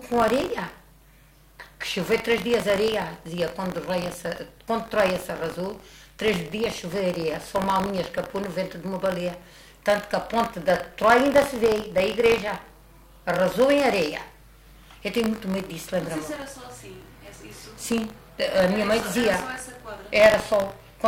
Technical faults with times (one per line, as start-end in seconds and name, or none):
0.00-21.07 buffer tearing